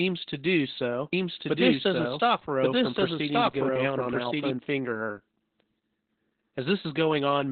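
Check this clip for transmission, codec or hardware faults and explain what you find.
Two faults are present: codec damage across the whole speech clip, and a second copy of the audio overlapping it for a few seconds.

Opus voice compression, throughout: the narrowband SILK coder leaves nothing above 4.3 kHz, and its coarse excitation makes speech muffled and hoarse, consistent with roughly 8 kbps. This is codec coding rather than a plain low-pass filter.

Doubled audio track, 1.13 to 4.51 s, between "to do so" and "finger her": a dry, full-band copy trails about a second behind at nearly equal level and starts and stops abruptly. That abrupt start and stop, with no decay or room colour, rules out reverb or echo. A likely cause is a second, slower capture path mixed in.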